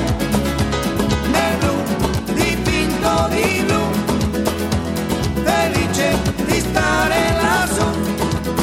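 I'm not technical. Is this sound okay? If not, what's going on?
Yes, nothing here needs attention and no technical problems turn up anywhere in it.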